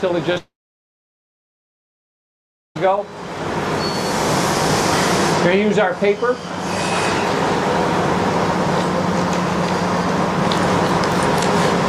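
Right near the start, at about 0.33 to 0.38 s, there's a short concealed packet loss. Roughly 20 ms of audio never showed up, so the receiver patched the gap by extending the previous sound for a moment and then easing back into the real signal, which leaves a quick smear or wobble. Straight after that, from 0.38 s to 2.77 s, there's what sounds like a long network dropout, likely the connection stalling. Nearly 2.4 s of audio is missing. The concealment carries the last sound on as a fading buzz or hiss for a moment, then you get about 2.25 s of silence before the sound picks up again with that whole stretch simply gone.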